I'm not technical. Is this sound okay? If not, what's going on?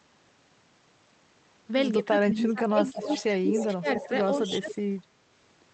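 No. Two related problems show up in this speech clip.

Speech suppressed in double talk, from 1.99 to 4.13 s, again at 4.42 to 4.69 s and briefly at 4.89 s: the voice sinks and drops out in pieces. It's likely that both people spoke at once, and the call's echo remover couldn't tell the local voice apart from the other side coming out of the loudspeaker, so it turned everything down.

Echo leak at 2.98 to 3.24 s, 3.49 to 3.67 s, 3.92 to 4.17 s, and in tiny scraps at 4.48 and 4.7 s: a repeat of the voice arrives about a quarter of a second late. The likely cause is a loudspeaker on one end, where the echo remover didn't catch everything the microphone picked up, so part of it was sent back.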